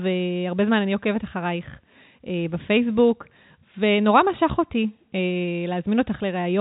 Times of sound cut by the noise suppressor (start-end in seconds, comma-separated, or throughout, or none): none